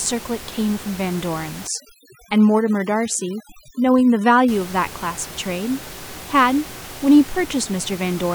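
Overdone noise removal hits this speech recording from 1.67 to 4.48 s: a noise reduction stage set far too aggressively clamps individual frequency bands down or off whenever they sit close to its noise estimate, taking quieter parts of the voice along with the noise. Over that stretch the room noise, otherwise about 17 dB under the speech, drops and breaks up into twinkling specks.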